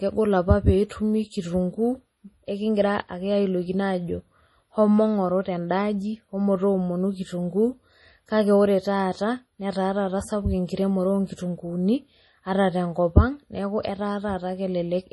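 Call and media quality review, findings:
MP3 compression, throughout: heavy watery, swirly speech; treble stops hard at 11.5 kHz; s sounds chirp metallically. Likely a starved MP3 encoder, which fits roughly 32 kbps, zeroing weak lines frame to frame. The swirl distinguishes it from plain low-pass filtering.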